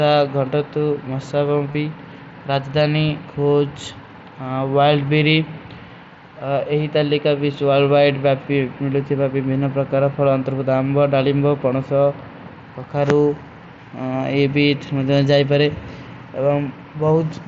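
At 1.72–1.75 s and 5.07 s, concealed Bluetooth headset packet loss patches gaps with repeated recent waveform; the three-frame run at 1.72 s gives a brief buzzy hold rather than a silent dropout, while the single lost frame at 5.07 s is nearly hidden.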